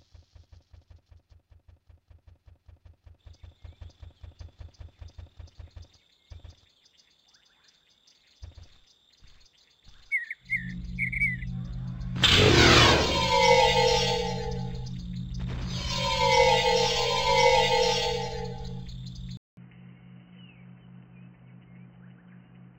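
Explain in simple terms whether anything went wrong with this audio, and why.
At 19.37 s the sound drops out for a fifth of a second, then returns dull and boxy, with nothing above 3 kHz, a faint new background hiss and about the same loudness. That gap plus the changed hiss points to an input switched to a poorer device, likely a headset, rather than simple muffling.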